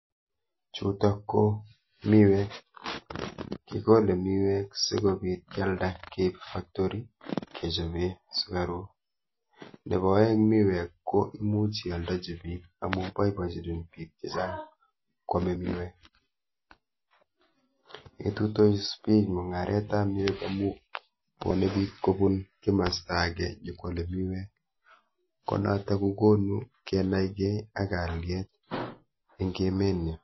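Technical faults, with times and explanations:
Throughout: MP3 compression. Plainly audible codec damage across the speech, with nothing above 5.8 kHz, so sibilants sound dull. Weak spectral lines drop in and out between frames, giving a watery, swirly texture, likely from a low bitrate around 24 kbps.
27.46 s: audio missing between chunks. A skip of roughly 50 ms, with the material on either side butted together and no gap of silence. It falls at a chunk boundary, consistent with 6-second processing blocks, and likely comes from data lost during the handover.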